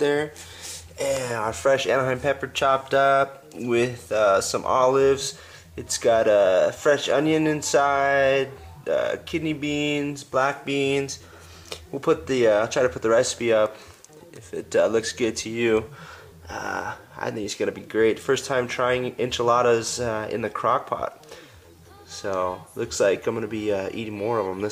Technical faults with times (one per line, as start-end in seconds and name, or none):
none